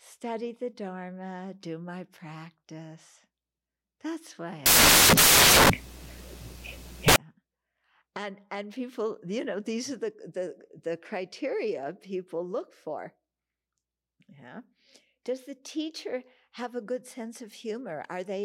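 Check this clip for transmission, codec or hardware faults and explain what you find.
One fault is present. From 4.66 to 7.16 s, the speech is replaced by samples built from the wrong bytes. The reader assembles each sample incorrectly. It may be off by one byte, swap the byte order or assume the wrong alignment. The rapidly changing low-order bits then become the most significant part of each value. The result is loud, harsh broadband noise lasting about 2.5 s.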